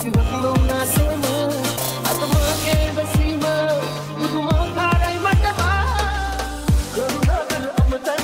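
From 0.79 to 2.87 s, pre-emphasis is left on. The treble was boosted before storage, and the matching de-emphasis cut never followed. Highs sit about 8 dB above 1 kHz at 10 kHz, which fits the CD 50/15 µs curve. The sound turns thin, bright and hissy.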